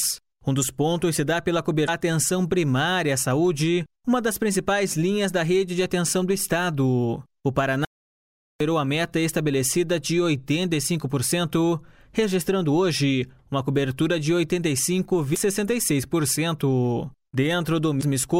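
At 1.84 to 1.89 s there is a short glitch from damaged data in the compressed stream. Corrupted bytes make the decoder misread frames, lose sync and skip ahead to the next valid frame header, leaving a brief glitch. At 7.85 s the sound cuts to silence for 0.76 s, resuming at 8.60 s. This audio dropout to silence leaves no room tone, likely because the input was lost while the recorder kept writing silence. The same stream damage returns as blips at 15.32 to 15.37 s and 17.99 to 18.03 s.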